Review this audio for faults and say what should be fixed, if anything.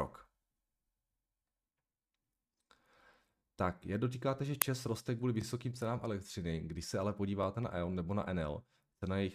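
The chunking stage started each new chunk about 20 ms before the previous one had finished, so the tail of one chunk was played again at the head of the next. This is an overlapping-chunks fault, heard as a brief stutter with a click at 1.38–1.40 s, 5.42–5.44 s and 7.44–7.46 s, where 20 ms of speech sounds twice. The joins fall at the boundaries of chunks about 2 s long. To prevent it, advance each chunk by exactly its own length, or crossfade and discard any deliberate overlap before output.

At 4.62 s a playback block was sent out before any audio had been written into it, so whatever was left in memory played as samples. This uninitialised-buffer fault is a sudden, loud crack lasting about 2.9 ms, which fits a 128-sample block. It has no relation to the surrounding speech. To prevent it, zero every buffer when it is allocated and only hand it to playback once it has been filled.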